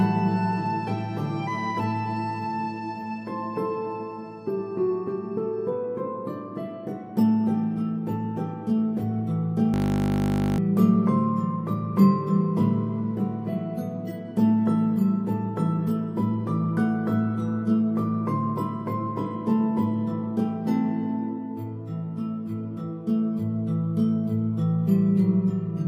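At 9.74 s the sound locks up into a system hang loop that runs until 10.58 s. The machine or its driver stalled while the audio hardware kept replaying the same 20 ms of its ring buffer, some forty times over. A loop that short repeats at 50 Hz, so instead of a stutter you hear a steady, flat buzz. When playback recovers, about a second of audio is simply missing.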